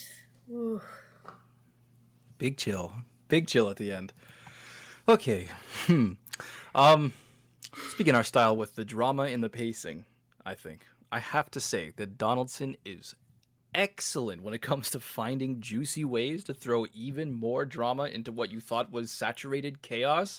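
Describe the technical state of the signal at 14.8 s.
Nothing at 14.8 s points to a fault; the speech signal is intact at that moment.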